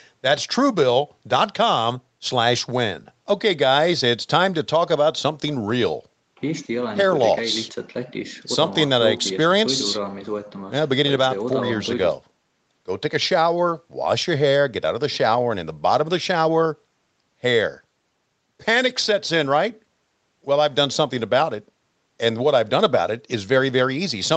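Nothing goes wrong anywhere in this speech, and the only things to notice are the usual marks of a call: the microphone processing trims the lowest bass, and the call codec leaves nothing above about 8 kHz.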